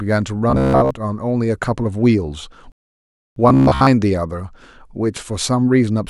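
Robotic sound from repeated short buffers appears in this speech clip from 0.50 to 0.91 s and again from 3.49 to 3.87 s. Both stretches turn into a rigid, metallic buzz at 66.8 Hz that only loosely tracks the speech. The likely cause is audio arriving too infrequently, so playback loops the last fragment, about 15 ms, which fits that buzz period. Roughly seven-tenths of each stretch is repeated material, and the real audio underneath is skipped. A rebuffering stall runs from 2.72 to 3.36 s. The sound drops to silence for about 644 ms because the player exhausted its downloaded audio, then resumes exactly where it halted, adding time without losing any content.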